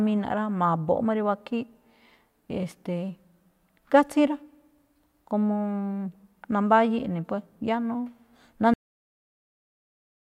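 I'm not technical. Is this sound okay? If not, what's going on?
No, not quite. There's a cut-off end: at about 8.74 seconds the speech just stops dead, mid-sound, with no natural fade, and the rest is pure silence. The last stretch of the recording was never saved or played, so it simply vanishes.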